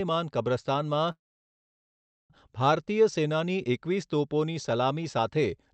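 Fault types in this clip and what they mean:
Call audio freeze: from 1.11 s a short fading buzz, then a flat waveform and empty spectrogram for 1.13 s, likely a starved jitter buffer; speech resumes intact at 2.32 s.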